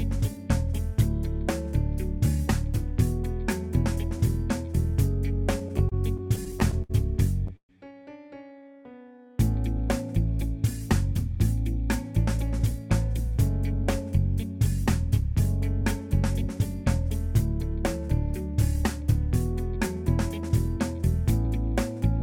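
From 5.59 to 7.71 s the audio shows repeated stalls (stutter): packets kept arriving late, the jitter buffer ran dry 14 times, and each gap was bridged by continuing the last sound, about 337 ms in total, the longest 125 ms. Unlike packet loss, nothing is missing; the sound hitches and drags.

Between 8.61 and 10.41 s comes a jitter buffer slow-down. The receiver rebuilt its reserve by repeating single pitch periods, adding 81 ms, so the sound plays at 96% speed. Pitch stays put, which separates it from a clock or resampling error, and the stretching is smooth rather than broken into hitches.

From 19.02 to 21.45 s a jitter buffer speed-up trims excess buffered audio. Short pitch-period pieces, roughly 70 ms in all, are cut out, running the sound at 103% with pitch unchanged. It is the mirror of the earlier slow-down: slightly faster, with no gaps or clicks.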